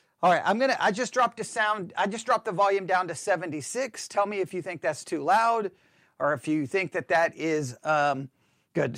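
A short recording of speech, with no technical faults to be heard anywhere in it. Nothing in the signal chain calls for attention, and no time in the recording stands out as damaged.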